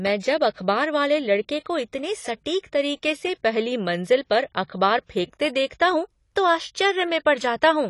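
The speech has likely passed through AAC compression at a low bitrate, which fits around 32 kbps, so the encoder trimmed high frequencies and coarsely quantised the rest. Throughout, the sound is dull and smeared, with a warbling, fizzy texture on sibilants and held sounds.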